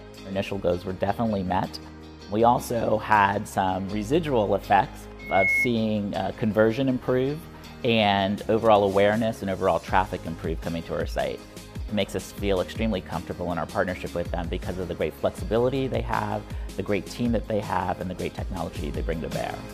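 Loudspeaker feedback squeal from 5.19 to 5.72 s: the microphone re-amplifies its own loudspeaker, so a 2.2 kHz tone swells within a fraction of a second, ending about 5 dB above the sound.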